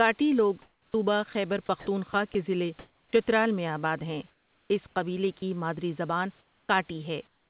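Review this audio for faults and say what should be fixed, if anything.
Between 0.62 and 3.13 s the sound is chopped by the voice detector. About 770 ms in total is replaced by synthetic fill, so syllable edges drop out. The likely cause is the sender's voice detector repeatedly gating transmission off and on.

Comfort noise replaces the background from 4.3 to 5.42 s, 6.39 to 6.69 s, and 7.27 s to the end. The real room noise gives way to a smooth, featureless hiss, about 13 dB quieter in the second gap and about 9 dB quieter in the third. This likely comes from discontinuous transmission, with the receiver generating noise while nothing was sent.

From 5.39 to 5.42 s, sound is dropped by the voice detector. About 20 ms of sound disappears into the fill, likely because the detector judged quiet sound to be background and stopped sending.

From 6.67 to 6.69 s, the onset is clipped by the voice detector. 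The first 20 ms is missing, so the sound starts abruptly, without its soft attack. The likely cause is the detector reacting slowly when sound resumed.

Throughout, nothing is heard above 4 kHz, which fits a narrowband G.711 A-law path at 64 kbps.

To prevent these faults, disable the sender's voice activity detection and DTX, or lower its threshold and add longer hangover and lookahead.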